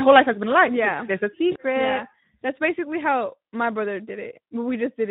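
Across the whole speech clip the voice sounds hoarse and grainy, with a noisy edge. This is the Speex codec at around 11 kbps. That CELP bit budget leaves too few bits to code the excitation, so the roughness is plainly audible.

From 1.51 to 1.56 s the voice smears into a brief, fading stretch of sound and stays weak just after. This is VoIP packet loss concealed by the speech codec. About 40 ms of audio went missing, which fits two lost 20 ms frames. The decoder stretched its last pitch and filter with falling gain, and it needed a moment to recover once packets returned.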